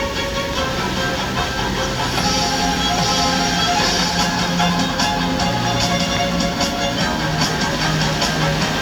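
A recording of everyday sound carries two loud pops, sharp single thumps at 0.53 to 0.55 s and 6.17 to 6.19 s, jumping roughly 10 dB and 15 dB above the sound, which continues underneath. Each is likely a brief voltage spike from a switch, plug or static discharge.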